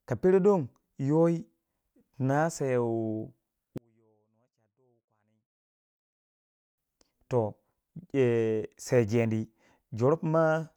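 From 3.78 to 6.78 s the speech collapses to a faint trace, roughly 41 dB quieter, then returns. The likely cause is one channel inverted: one stereo side has reversed polarity, so the centred voice cancels almost completely when the channels are summed to mono.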